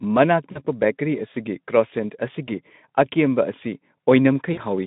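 Three short dropouts are VoIP packet loss concealed by the speech codec, at 0.51–0.61 s, 2.46–2.49 s and 4.53–4.62 s. Roughly 40, 20 and 40 ms of audio went missing, and the decoder smeared the last sound into a fading buzz or noise that takes a moment to recover. It sits over the narrowband Speex line.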